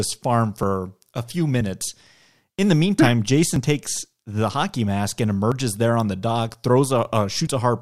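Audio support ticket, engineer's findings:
Audio missing between chunks at 0.63 s (just before "a few"), 2.59 s, 3.56 s (between "the meantime hmm" and "takes the") and 5.52 s (between "mask and" and "there on the"). Symptom: brief skips, about 20 ms lost each, sides butted together with no gap. Spacing lands on whole-second multiples, which fits a 1-second processing block. Likely cause: the recorder or processor dropping samples while handing off from one block to the next.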